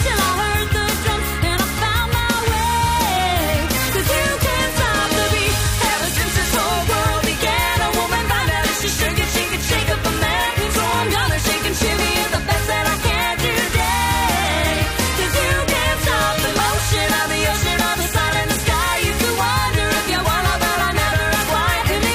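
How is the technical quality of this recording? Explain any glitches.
No glitches or faults detected.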